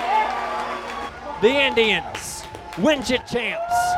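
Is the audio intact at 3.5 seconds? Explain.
No. From 3.21 to 3.71 s one channel drops out, likely because one stereo side stopped delivering signal. Once the channels are summed, the shared content falls abruptly by about 6 dB, and is otherwise unchanged until 3.71 s.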